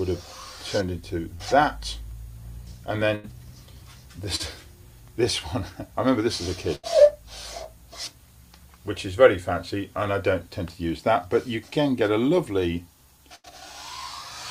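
At 1.35 s there is a short concealed packet loss: about 40 ms of audio failed to arrive in time, and the receiver bridged the gap by extending the preceding sound for roughly 40 ms before blending back into the real signal. It registers as a brief smear or wobble rather than a clean dropout. The same fault recurs at 4.36 s, again covering about 40 ms, with the same short patched-over blur.

At 3.15 s a burst of packet loss removes about 80 ms, more than a single short gap. The receiver continues the last sound for around 80 ms while fading it down, so the audio turns into a held, decaying tone or hiss and then picks up further along with that section missing. Similar bursts follow at 6.75 s and 13.35 s, each about 80 ms long and each heard as a fading fill followed by a jump forward.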